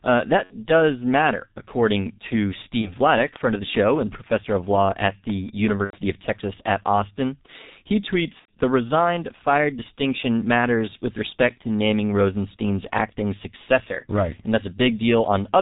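Throughout, the speech carries the sound of the G.723.1 codec at about 6.3 kbit/s. Nothing above 4 kHz survives. The voice model updates slowly over 30 ms frames. Speech sounds muffled and hoarse, and consonants smear together. The damage is heavy.

VoIP packet loss concealed by the speech codec appears four times. At 0.44 to 0.55 s, just before "does matter according to", the sound stretches into a fading buzz or coloured noise. At 2.81 to 2.95 s, just after "does matter according to", it happens again. Similar gaps follow at 5.84 to 5.98 s and 8.39 to 8.51 s. The decoder repeated its last pitch and filter and lowered the gain each frame. The lengths fit about 60, 30, 90 and 90 ms of missing audio.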